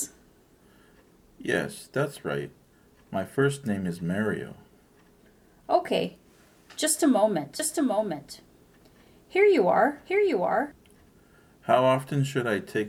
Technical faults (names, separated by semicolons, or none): doubled audio track